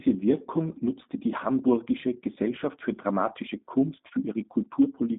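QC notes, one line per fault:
Throughout: G.729 codec. The speech sounds narrow and telephone-like, with a slightly rough, synthetic buzz and plainly audible coding damage. Nothing reaches above 3.8 kHz, and the usable line band runs from about 150 Hz to 3.6 kHz. The audio has been rebuilt from a vocal tract filter, a pitch predictor and a few pulses per short frame rather than passed as a waveform. That sound fits the G.729A variant at 8 kbit/s.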